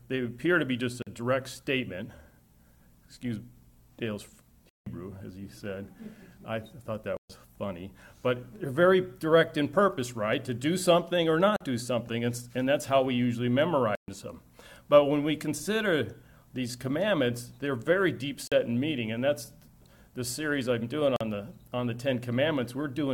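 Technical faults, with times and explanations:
1.02, 11.56, 18.48 and 21.16 s: block of digital silence, a brief 43 ms hole in the sound, each fitting a 2048-sample buffer left empty.
7.17 and 13.95 s: block of digital silence, a clearer 128 ms dropout.
4.69 s: block of digital silence, the longest hole at 171 ms, fitting an 8192-sample buffer.
Each time, playback likely missed its deadline, so zeros replaced the audio and the sound cut out and back abruptly.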